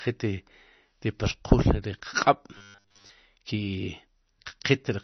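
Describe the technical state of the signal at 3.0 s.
At 3.0 s the speech has turned into a rigid, metallic buzz pinned at a steady 100 Hz, lasting from 2.57 s to 3.12 s. It still roughly follows the speech's shape. This is robotic sound from repeated short buffers, likely caused by new audio arriving too seldom so that the last 10 ms is looped to fill the gap. That loop length sets the 100 Hz pitch, and most of the real audio in this stretch is skipped.

Underneath, the sound is dull and watery. The damage is plainly audible: weak frequency components flicker in and out between frames, smearing the onsets. This is MP3 compression, likely at a low bitrate around 32 kbps. With so few bits, the encoder cuts the treble at a fixed frequency and drops the quieter detail it judges inaudible, and that swirly coloring runs through this moment as it does through the whole clip.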